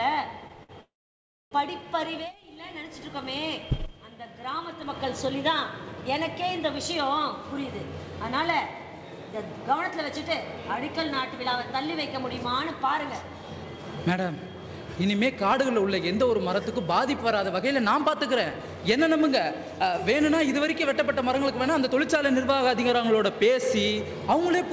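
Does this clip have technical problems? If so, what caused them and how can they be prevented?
Yes. At 0.63 to 0.71 s, a short stall from a late packet: the jitter buffer ran dry and the last sound was stretched by 55 ms. On a spectrogram this looks like smeared, repeated harmonics. A slightly deeper jitter buffer prevents this.

At 0.81 to 1.53 s, a call audio freeze inserts 0.70 s, most of it (0.63 s) silent. The waveform goes flat after a fading tail. This is likely from packets held up in the network. Better network prioritisation or a larger buffer prevents it.

From 15.26 to 22.37 s, a jitter buffer speed-up plays the audio at 106% to shed roughly half a second of backlog. The spectrogram shows compressed timing with unchanged pitch. Steadier packet delivery avoids the backlog.

The G.722 call path shows nothing above 8 kHz.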